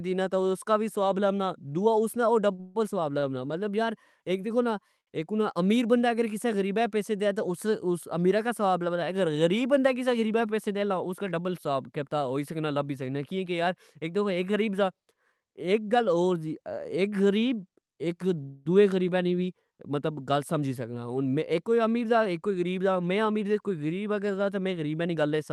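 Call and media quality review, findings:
Repeated stalls (stutter), 2.51–3.24 s: speech drags and catches four times. The jitter buffer keeps running dry and the receiver holds the last sound for about 230 ms total, longest hold 146 ms. That's roughly a third of the span. Nothing lost, just halting.

Short stall from a late packet, 5.00–5.09 s, between "دیکھو نا" and "اک امیر بندا اک": one sound is held about 65 ms with a slight buzz or dip. A late packet emptied the buffer, the receiver stretched audio until it landed, then resumed cleanly.

Jitter buffer speed-up, 10.27–11.04 s, right after "اگر غریب بندا کسہ": speech runs about 6% fast at unchanged pitch, slightly rushed. The buffer was over target, so the receiver trimmed pitch-period-sized slices, somewhere around 50 ms in all. Again at 22.05–23.78 s, about 11% fast, roughly 200 ms trimmed, more noticeably hurried.

Call audio freeze, 18.42–18.67 s, just before "دؤئے غریبہ نی وی": the sound hangs as a fading buzz or hiss for about 233 ms, never reaching silence, then picks up where it stopped. 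Likely packets held up in transit, jitter buffer ran empty, concealment filled the wait.

On the Opus call path at 32 kbps, the audio tops out near 12 kHz.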